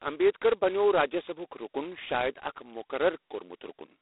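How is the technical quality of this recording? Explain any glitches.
Technical quality is poor: heavy telephone-codec damage runs through the whole recording.

G.726 ADPCM is present from start to finish. The codec sends only a coarse few bits per sample describing how the signal departs from a running prediction. The heavy damage here suggests the lowest, 16 kbit/s mode. That coarse quantisation adds a harsh, rasping hiss that swells and fades with the speech level. The band is narrow, roughly 300 Hz to 3.7 kHz. On a spectrogram, energy stops hard near 3.9 kHz, with grainy noise filling the gaps between harmonics.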